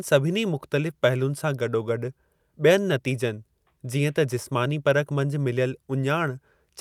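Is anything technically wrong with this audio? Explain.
No, nothing technically wrong.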